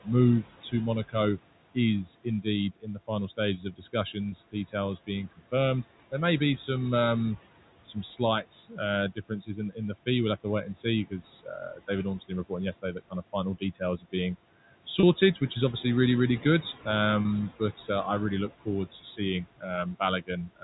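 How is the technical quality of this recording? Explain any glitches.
It's a call recording with three kinds of problem: a noise suppressor working hard, speech it swallows, and a few short packet dropouts.

Noise suppressor artifacts run the whole way through. The background gets pulled down by about 18 dB between phrases, then swells back under the talking.

Speech cut by the noise suppressor happens at 0.04–1.15 s, 1.74–5.53 s, 7.86–14.14 s (right after "may be some um") and 18.49 s to the end (after "but uh I really"). The suppressor mistakes soft consonants and endings for noise and dips them by about 16–19 dB, so they sound faint or swallowed. That adds up to roughly a fifth of a second, most of a second, about a second, and under half a second respectively.

Packet loss with pitch repetition shows up at 4.29–4.32 s, 15.00–15.03 s and 17.22–17.25 s, the last just before "but uh I really". 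Each is a 30 ms gap, likely a single lost packet, bridged by repeating the last pitch cycle, so you hear a brief buzzy hold.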